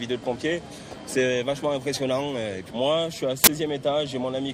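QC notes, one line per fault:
3.44 to 3.48 s, uninitialised buffer: a sudden, loud burst of harsh digital noise lasting about 40 ms. A block of output was played before any audio had been written into it. Stale memory contents were sent out as samples instead.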